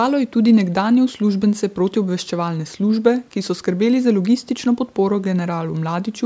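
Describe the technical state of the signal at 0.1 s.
At 0.1 s the audio is intact, with no fault present; only the normal band limiting of call microphone processing shapes the sound, with its usual high-pass filtering of the lowest bass and nothing above 8 kHz.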